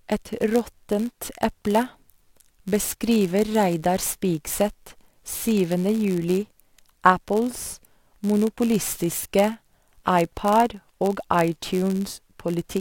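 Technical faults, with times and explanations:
Throughout, block size mismatch (padded): one stage is handing over blocks a little shorter than the next stage expects, and the leftover space in each block gets filled with zeros. That tiny silent gap repeats about 91.5 times a second, so the speech picks up a steady buzz at that rate. The gaps also stretch everything out, so it runs at 0.996 of normal speed while the pitch stays essentially where it should be.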